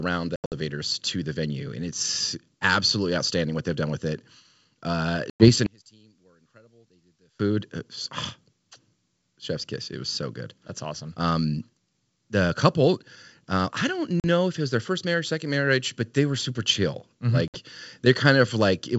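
Packet loss on an ADPCM call strikes four times. Around 0.36 to 0.54 s, about 140 ms of audio drops out in several gaps over 160 ms, the longest 80 ms, just before "to the venue and". Further holes follow at 5.30 to 5.49 s (100 ms), at 14.20 to 14.25 s (40 ms) between "couple uh I don't" and "if it was their", and at 17.48 to 17.58 s (60 ms). Each loss leaves a hard-edged silence, and because the decoder's predictor and step size have drifted from the sender's, the speech comes back slightly distorted before settling.

From 5.66 to 7.40 s, the level collapses by about 33 dB. This is likely one channel inverted, so that the shared centre content cancels when the channels are summed to mono. What remains is a faint residue until full level returns.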